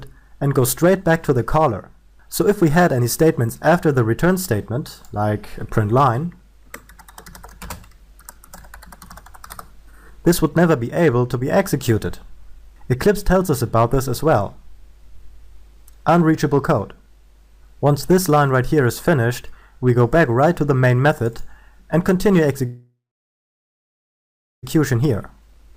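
The audio is affected by hard clipping throughout, with peaks driven about 4 dB past the ceiling of some stage so their tops are sheared flat. Only a small fraction of the signal, around one percent, goes over, so the damage is crackle on the loudest moments rather than a constant fuzz. The crackle is bright and abrupt at the peaks, unlike the gradual, rounded thickening of soft saturation.

From 22.65 to 24.65 s there is a call audio freeze. The last sound is held as a decaying buzz that sinks to silence for about 1.66 s, and the audio then resumes exactly where it stopped. This is likely a jitter buffer running dry while packets were delayed. About 1.98 s of filler is inserted and nothing is lost, which separates it from a packet-loss dropout, where a piece of the sound would be skipped.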